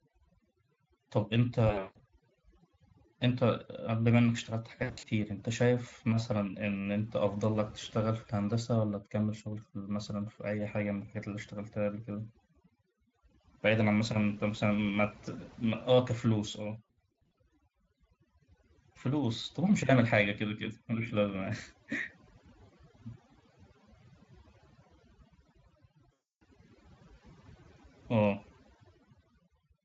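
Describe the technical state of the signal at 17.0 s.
At 17.0 s you're inside a stretch of VoIP packet loss concealed by the speech codec, running from about 16.86 to 17.37 s. The decoder fills missing audio by extrapolating its last pitch and filter while lowering gain, so the lost stretches become a stretched tone or coloured noise that fades. It sounds like roughly 240 ms lost over that half second, with gaps up to about 60 ms, and the speech stays weak briefly after.

The whole clip also has overdone noise removal. The background drops and breaks up into twinkling specks, and frequency bands close to the noise estimate get cut along with quiet speech detail, all under the light Speex coding.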